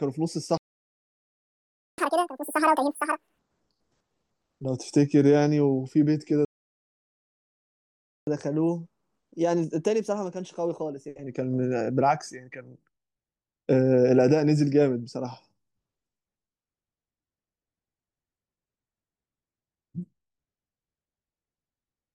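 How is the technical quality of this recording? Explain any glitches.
The recording has two stall-and-recover glitches in this speech. Each silence is followed by a stretch of sped-up playback.

A playback stall cuts the speech off from 0.58 to 1.98 s, about 1.4 s, and again from 6.45 to 8.27 s, about 1.8 s. The sound simply stops mid-flow. The player likely ran dry of data or had its thread blocked, so nothing reached the output.

Catch-up at higher speed follows each stall. From 1.98 to 3.39 s the speech runs at 2.0 times speed, raised around ten semitones, a high chipmunk-like squeak. From 8.27 to 11.27 s it runs at 1.1 times, about a semitone and a half higher, a subtler rush. In both, the player resamples its backlog faster to regain lost time, then returns to normal.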